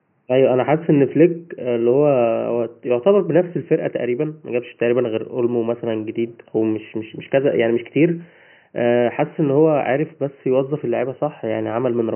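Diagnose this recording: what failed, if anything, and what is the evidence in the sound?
Nothing stood out on listening to this speech recording, and the only other sound is faint room noise about 47 dB below the speech, which belongs to the space where it was recorded rather than to any stage of the system.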